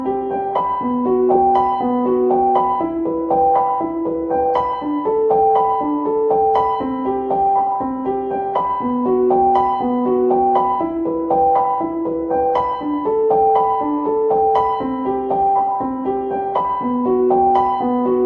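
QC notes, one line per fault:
No faults were heard in this recording of sounds.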